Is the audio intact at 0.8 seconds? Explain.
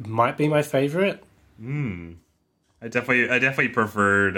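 Yes, the speech is intact at 0.8 seconds, with no fault present at that moment.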